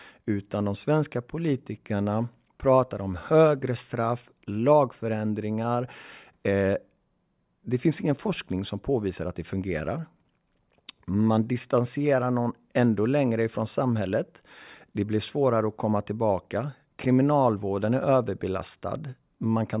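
Nothing in the speech stood out as a technical fault on listening.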